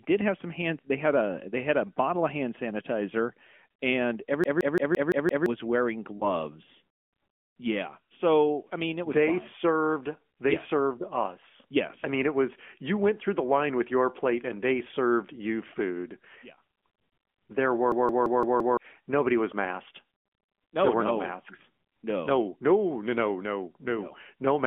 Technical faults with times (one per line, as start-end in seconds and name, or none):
0.00-24.66 AMR narrowband mobile codec
4.44-5.46 system hang loop
6.18-6.24 lost AMR speech frames
17.92-18.77 system hang loop